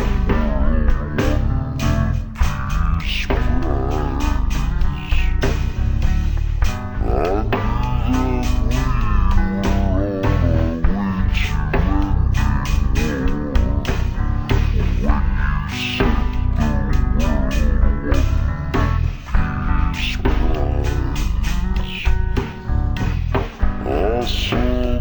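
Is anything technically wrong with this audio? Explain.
Yes, it's stereo read as mono throughout: the interleaved left and right samples run as one channel, so everything plays at half speed and a full octave low.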